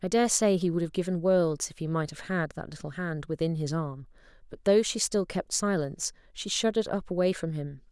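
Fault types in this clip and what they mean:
No faults can be heard in this speech recording.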